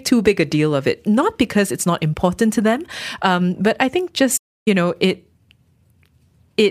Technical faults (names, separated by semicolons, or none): playback stall